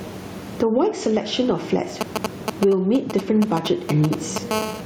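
Throughout the speech there is gain pumping. The gain swings by around 15 dB, so loud and soft passages sit unnaturally close together and the sound is squashed. The likely cause is gain set far too high ahead of a fast limiter or compressor. On a waveform the envelope looks flattened. The room noise sits about 33 dB below the speech.

From 2.01 s to 4.53 s, GSM signalling bursts break in. A nearby 2G phone is exchanging short groups of radio bursts with the network, and the audio circuit rectifies them into a galloping dit-dit-dit of short buzzes at 217 Hz, roughly 10 dB below the speech. A spectrogram shows short stacks of vertical lines with harmonics at multiples of 217 Hz, arriving in irregular clusters.

At 4.53 s the pattern changes into continuous GSM phone buzz, which lasts until 4.81 s. The phone is now transmitting steadily as in a call, and its 217 Hz burst rate is rectified into a hard, raspy tone about 15 dB below the speech, with no relation to what is being said. 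On a spectrogram this appears as an unbroken comb of evenly spaced horizontal harmonic lines. On the waveform it shows as a regular pulse train riding on the signal.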